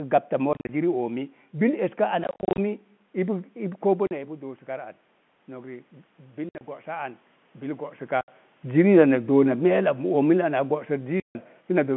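Packet loss filled with silence starts at 0.53 s and lasts until 0.69 s, just before "ziri oomi". About 110 ms of sound drops out in short bursts. The longest gap is 40 ms. The holes come in steps that fit 10 ms packets. Each one has hard edges. The same dropouts come back at 2.24–2.58 s (210 ms lost), 4.07–4.11 s, 6.49–6.61 s, 8.21–8.28 s and 11.2–11.35 s.

Automatic gain rising runs from 3.58 s to 8.39 s. The talker moves away around 4 s, and the input falls by about 11 dB. The gain control slowly adds about 7 dB. Voice and room noise swell up together over several seconds.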